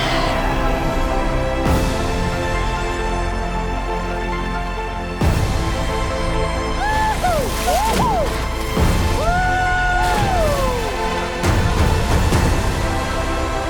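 Nothing in the recording stood out as a technical problem on listening.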